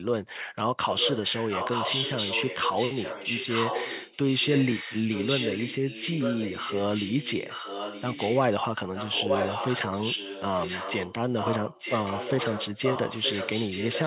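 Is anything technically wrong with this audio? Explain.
Yes. An echo leak runs from 0.97 to 8.43 s, 8.93 to 11.14 s, and 11.34 s to the end. The far end's echo canceller likely let its loudspeaker pickup through, so the voice returns 921 ms later, about 5 dB quieter than the original, over narrowband audio that stops at 4 kHz.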